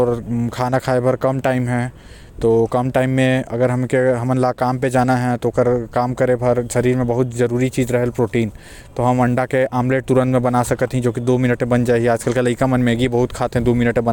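No technical faults can be heard in the recording, so there are none to describe in time order.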